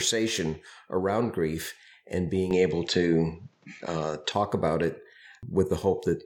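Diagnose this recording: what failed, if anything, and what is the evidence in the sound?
From 2.51 to 4.32 s the speech turns duller and shifts in level by roughly 5 dB, with nothing above 7.8 kHz and a faint new noise floor, switching cleanly without a gap. This is likely an input switched to a poorer device at the driver stage, with its narrower bandwidth, different gain and its own background noise.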